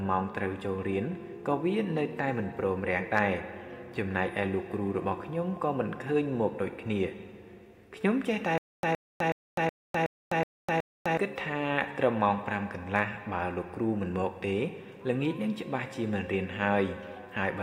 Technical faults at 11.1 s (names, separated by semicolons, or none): stutter with silent gaps